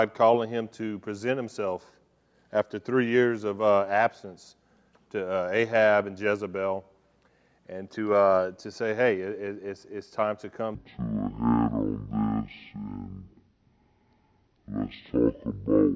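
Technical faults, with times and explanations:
10.75 to 15.95 s, wrong sample rate: the audio drops to half speed and a full octave lower, 12 semitones down. Material captured at 32 kHz is being clocked out at 16 kHz without resampling. Each second of sound stretches to two, and every frequency halves, so it drags and booms.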